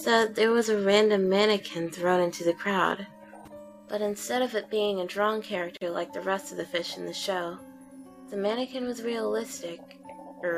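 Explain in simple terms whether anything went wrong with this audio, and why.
At about 5.77 seconds the sound drops out for roughly 40 milliseconds, then picks up right where it left off. That's a gap at a join of encoded pieces: two separately compressed chunks were stitched together, and the bit of silence each chunk carries at its edges was never trimmed away.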